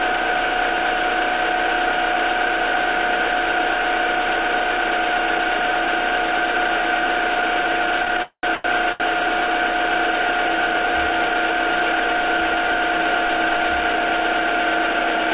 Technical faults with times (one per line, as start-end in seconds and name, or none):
8.05-9.02 repeated stalls (stutter)
8.22-8.45 call audio freeze
12.96-15.32 jitter buffer speed-up